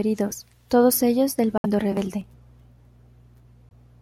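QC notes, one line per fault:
1.58–1.66 s and 3.69–3.72 s, Bluetooth dropout: abrupt silences of about 64 ms right after "todos ellos del" and about 21 ms later, likely from late wireless packets, roughly three then one. Speech resumes further along, not repeated.
2.21 s to end, de-emphasis applied wrongly: treble slopes smoothly down, about 11 dB lower at 10 kHz than at 1 kHz, dulling the speech. A gradual tilt, not a sharp low-pass cutoff.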